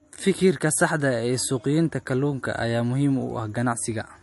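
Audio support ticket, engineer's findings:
MP3 compression throughout, likely a bitrate near 48 kbps. Encoder short of bits drops weak frequency lines and cuts treble: nothing above 11.3 kHz, plainly audible watery swirl on speech.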